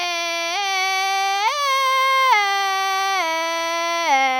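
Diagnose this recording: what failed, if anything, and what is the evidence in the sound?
Nothing here points to a failure at any stage: the music runs along steadily with no dropouts, clicks, level jumps or other sign of a broken chain.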